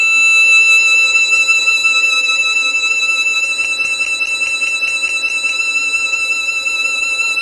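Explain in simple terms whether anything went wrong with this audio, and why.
A CD stuck on one turn skips from 3.64 to 5.49 s. A scratch keeps throwing the player's laser back to the same spot, so the same 0.21-second slice of music repeats nine times, with a tiny gap at each jump. The result is a fast, even stutter.

HE-AAC compression, likely the cause, affects the whole clip. It stores only the lower tones in detail and fakes the treble by copying lower sounds upward. Cymbals and bright edges come out gritty and metallic, with nothing above 11.4 kHz.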